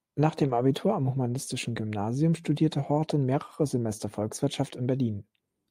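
At about 0.47 s, short concealed packet loss: roughly 20 ms of the call arrived too late for the decoder, and the receiver patched the gap by extending the preceding sound before blending back into the real audio, leaving a brief smear or wobble in the speech.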